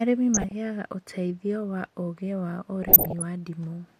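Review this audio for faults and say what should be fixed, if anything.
DAB burbling at 0.34–0.52 s, before "ũteithio wa ũũgĩ wa", and 2.83–3.22 s, after it. Bit errors of somewhat under one percent slip through and corrupt samples in single sub-bands, giving short blips of noise rather than the clean silent gaps of dropouts. Better reception, through a stronger antenna or signal, would keep errors within correction.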